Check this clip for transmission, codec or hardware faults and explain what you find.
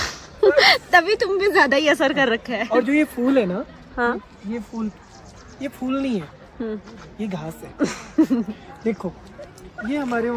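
No transmission, codec or hardware faults are audible here.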